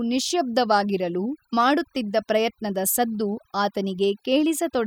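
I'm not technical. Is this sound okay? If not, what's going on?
No. The whole clip has overdone noise removal. A cleanup tool was set too strong. It cut away the background noise and quiet parts of the speech too. The pauses sound quieter, with twinkling specks.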